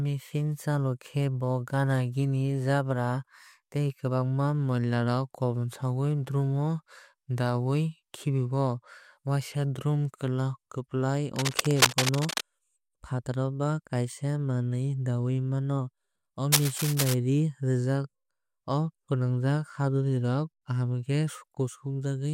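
Scratchy, rustling bursts about as loud as the speech run from 11.36 to 12.41 s and 16.52 to 17.14 s, cable scratch noise likely from a worn connector being moved.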